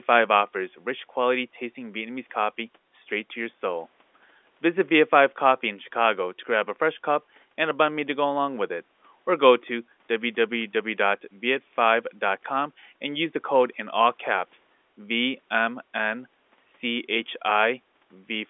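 No technical faults can be heard in this recording.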